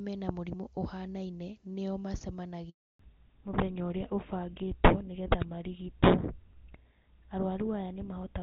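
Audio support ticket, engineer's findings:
Handover gap, 2.69 to 2.99 s: sound cuts out within a few tens of milliseconds, then 300 ms of dead silence. Waveform shows a flat-line hole, spectrogram a blank vertical band. Network handover; no speech frames arrived during the switch.

Fallback to narrowband, 2.99 s to end: duller, rougher sound. Before the drop, clean wideband audio consistent with HD Voice at a high rate. After it, the spectrogram shows nothing above 4 kHz, a hard horizontal ceiling. Codec switched to GSM full rate.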